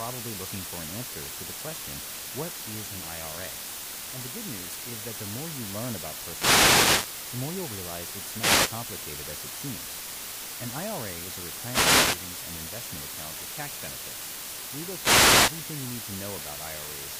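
A constant, even hiss runs under the speech for the whole clip, sitting only about 10 dB below it, yet the speech itself stays clean and undistorted. This is low bit depth with dither, consistent with about 4 bits, where added noise turns rounding error into steady broadband hiss.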